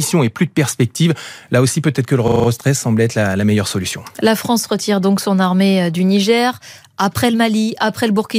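From 2.28 to 2.48 s the speech stops moving forward and a single 40 ms fragment repeats five times, giving a brief rattling stutter that pulses at 25 Hz before normal playback resumes with essentially nothing missing. This is a system hang loop. The computer or its audio driver stalled while the sound hardware kept replaying the same ring buffer, a cycle length that fits a buffer of about 40 ms.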